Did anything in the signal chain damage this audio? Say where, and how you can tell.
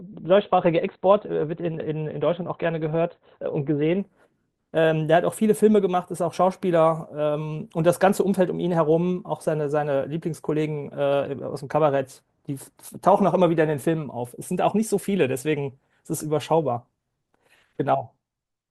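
Yes, at the codec and playback stage: an adaptive stream starting at a low bitrate. From 0.0 to 4.0 s the speech has nothing above 4.4 kHz and heavier codec artefacts, which fits a low-rate Opus version of about 12 kbit/s. At 4.0 s the treble returns abruptly with no gap, which fits a switch to a higher version near 64 kbit/s once the player had measured the connection. A network dropout would leave a silence or glitch at the change, and a narrowband line would stay dull throughout.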